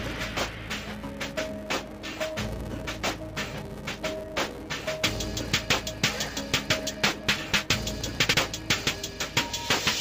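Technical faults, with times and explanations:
Throughout, interleaved audio read as planar: dull, robotic sound buzzing at about 345 Hz, as each 2.9 ms block, fitting 128 samples, is split into false channel halves.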